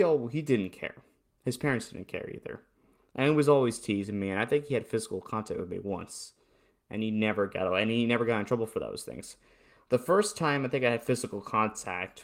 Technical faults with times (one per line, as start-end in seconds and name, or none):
none